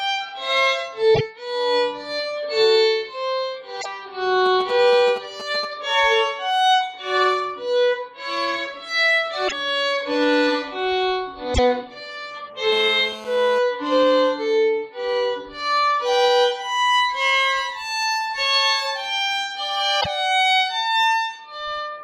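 At 1.14 to 1.21 s, 3.80 to 3.86 s, 9.47 to 9.53 s, 11.53 to 11.59 s and 20.00 to 20.07 s the audio skips ahead with a brief chirp or noise burst, likely a broken MP3 bit reservoir after dropped 26.1 ms frames, showing as short broadband smears or gaps. From 4.46 to 5.65 s, GSM signalling bursts from a nearby phone add galloping ticks and short 217 Hz buzzes, seen as spaced vertical comb clusters. From 12.72 to 13.59 s, a steady GSM phone buzz about 14 dB below the signal rasps at 217 Hz, drawing evenly spaced harmonic lines.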